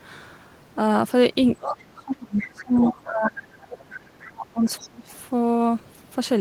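From 1.59 to 1.77 s a second voice slips in under the talker, returning at 1.97–2.01, 2.38–2.42, 2.77–2.91, 3.61–3.66 and 4.81–4.88 s, between about 10 and 30 dB below the speech. This is the other side's voice leaking through, likely loudspeaker playback that the echo canceller left in the microphone signal.

Over 1.61–3.48 s and again over 3.64–5.08 s, the talker's voice dips and breaks up in pieces, dropping by as much as about 30 dB for roughly 1.5 s and then 1 s in total. This is speech suppressed in double talk: with both sides speaking, the canceller likely could not separate the talker from the echo and attenuated both.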